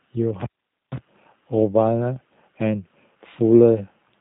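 From start to finish the speech carries G.729 codec damage, plainly audible. Content stops near 3.8 kHz, and the speech is rebuilt from a vocal tract filter, pitch predictor and sparse pulses, giving a rough, synthetic buzz consistent with an 8 kbit/s G.729A coder.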